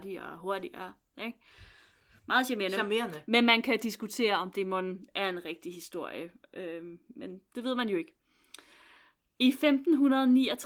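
Nothing in this speech recording stood out as a technical fault on listening.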